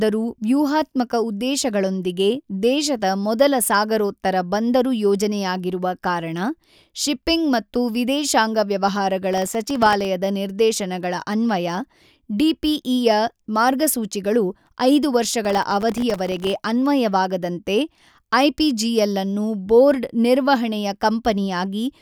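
Between 9.33 and 10.05 s, after "ಶಿಪ್ಪಿಂಗ್ ಮತ್ತು ವಿದೇಶಾಂಗ ವ್ಯವಹಾರಗಳ" and before "ನಿರ್ದೇಶನಗಳ ಅನ್ವಯ", processor overload crackle tears through the speech. It returns, longer and denser, from 15.45 to 16.53 s. Very short buffers, under a millisecond each, miss their deadlines in a run and fall to silence, so many tiny hard-edged gaps fuse into grit. A single dropout leaves one clean hole, and clipping follows loud peaks. This crackle rides over the speech and stops when the load clears.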